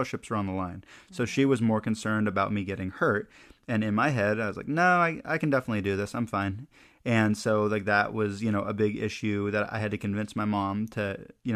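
Speech, with no technical faults to report anywhere in the recording.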